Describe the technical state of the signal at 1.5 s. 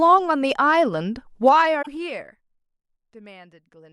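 At 1.5 s the speech is near the start of a zipper noise passage that runs from 1.42 to 2.65 s. The level is being pulled down by roughly 20 dB, but in discrete 2 dB jumps at about seven steps a second, with no ramping between them. Each jump makes a small discontinuity in the waveform, so a fine ticking rides over the speech for as long as the level is falling.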